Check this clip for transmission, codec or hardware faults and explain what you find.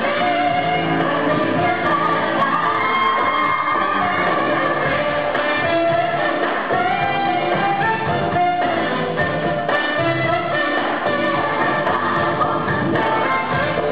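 No faults can be heard anywhere in this clip.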